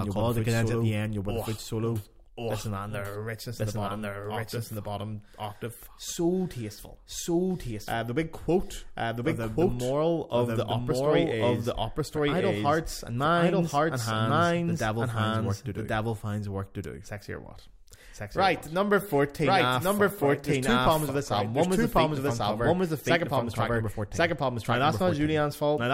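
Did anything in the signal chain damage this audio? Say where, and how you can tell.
Yes. A doubled audio track runs throughout: the speech repeats about a second later at roughly equal level, full-band, with no decay or room colour. A spectrogram shows each pattern duplicated one second later. The likely cause is a slower second capture path or an edit holding two misaligned copies.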